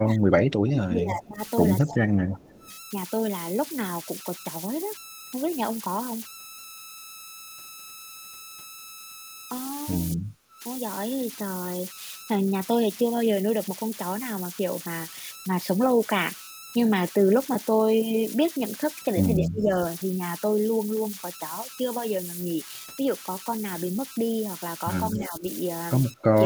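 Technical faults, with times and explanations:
Throughout: converter idle tones. A whistle near 1.5 kHz sits under the speech and shows up in pauses, with grainy noise about 14 dB below the signal. An undithered delta-sigma converter settles into repeating bit patterns on small inputs, and those patterns produce this tone.
0.00–2.67 s, 10.14–10.63 s, 19.39–19.71 s, 25.16–25.45 s, 26.13–26.36 s: speech suppressed in double talk. The voice dips or breaks up, falling by roughly 10 to 30 dB at its deepest, with the longest stretch at the opening. This is likely an echo canceller that could not separate the talker from the returning far-end signal and attenuated both.
1.23–1.95 s, 2.51–2.72 s, 25.21–25.26 s: echo leak. A faint delayed copy of the voice trails about 255 ms behind in the first two spots and about 240 ms behind in the last, at roughly 20 to 30 dB below the speech. It is likely residual loudspeaker pickup that the far end's echo canceller failed to remove.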